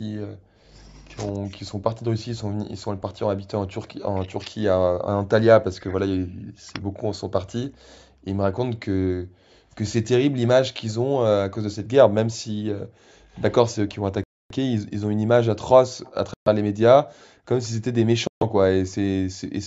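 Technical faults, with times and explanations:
Throughout, speech suppressed in double talk: with both ends talking at once, the echo canceller likely failed to tell this talker from the loudspeaker echo and pulled both down. The speech dips, thins or breaks off in pieces, by as much as about 40 dB, over roughly seven seconds in total.
10.88–10.93 s, 13.33–13.95 s and 16.04–16.12 s, echo leak: the far side's echo canceller likely let part of its loudspeaker pickup through, so a faint copy of the speech returns 174 ms late. It sits about 30 to 35 dB below the speech, in two brief scraps and one longer stretch.
14.24–14.51 s, 16.34–16.48 s and 18.27–18.42 s, Bluetooth stall: interference likely held back packets until the headphone buffer emptied, so playback stops dead for 267 ms, 126 ms and 138 ms, then resumes once the resent audio arrives. Call microphone processing is also audible, with nothing above 8 kHz.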